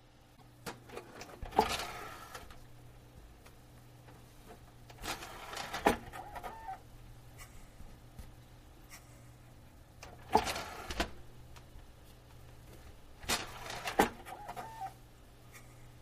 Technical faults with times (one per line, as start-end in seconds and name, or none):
0.35-0.42 broken MP3 bit reservoir